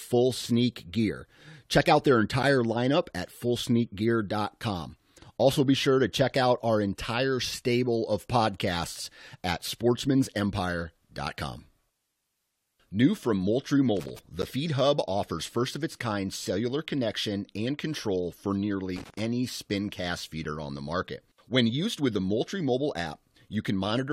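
At 2.43 s, between "out their" and "lineup at", there is a gap between stream segments: a hard-edged hole of silence about 11 ms long. The timestamps of two adjoining segments leave a small space, and the player fills that space with silence. No audio is lost, but the speech is cut off abruptly.

From 13.97 to 14.19 s, loose connector crackle produces an irregular burst of scratchy crackle. A worn or dirty contact is making and breaking rapidly, which chops the signal, and any DC on the line turns each break into a pop.

At 14.42 s, another segment gap leaves a clean hole of about 11 ms.

From 18.96 to 19.20 s, between "connection and control for" and "any spin cast", the connector crackles again with the same ragged scratching.

At 20.44 s, just after "any spin cast" and before "on the market", a shorter hole of about 9 ms appears. The three gaps fall on multiples of 6 s apart, which fits stream segments 6 seconds long.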